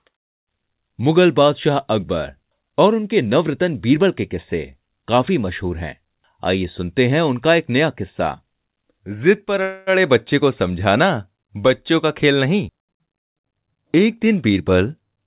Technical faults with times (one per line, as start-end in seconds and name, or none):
9.62-9.90 call audio freeze
13.44-15.16 jitter buffer speed-up